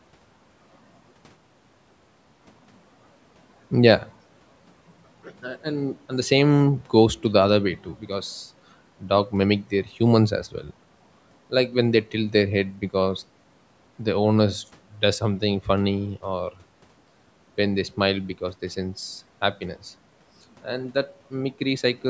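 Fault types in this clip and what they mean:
No technical faults can be heard in this speech clip.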